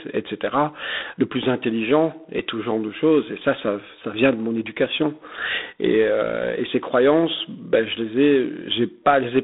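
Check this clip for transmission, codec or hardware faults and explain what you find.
There's one codec fault, and it runs the whole way through. G.726 ADPCM: the speech sits in a telephone band of about 200 Hz to 3.7 kHz, with nothing above 3.8 kHz. Each sample carries only a few bits of difference from an adaptive prediction, so there's a harsh, rasping hiss that rises and falls with the speech level. That roughness fits the 24 kbit/s mode.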